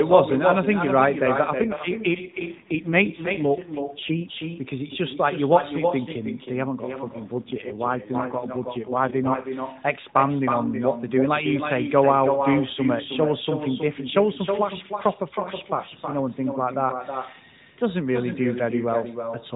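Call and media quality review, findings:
Echo with no canceller, whole clip: every phrase repeats about a third of a second later, roughly 6 dB down and thinner. Far-end loudspeaker pickup returns over the round trip. It is a distinct delayed copy, not a reverb smear.

AMR rate drop, 1.62–4.26 s and 7.39–9.52 s: the voice turns buzzy and synthetic with no gap and no narrowing of band. A weak radio link forces the lowest AMR-NB mode, consistent with 4.75 kbps, instead of the usual 12.2 kbps. This is unlike packet loss, which leaves dropouts.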